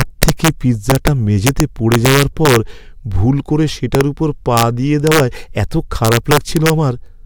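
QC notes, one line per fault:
0.01–0.48 s, 0.90–1.08 s, 1.47–2.56 s (just before "ভুল করে"), 3.95–4.01 s (just after "ভুল করে"), 4.57–4.63 s, 5.07–5.20 s, 6.05–6.70 s: integer overflow. Loud peaks exceed the integer ceiling by about 1 to 5 dB. Instead of limiting, they wrap to the opposite sign. Each swings across the full range, giving violent cracks far harsher than clipping.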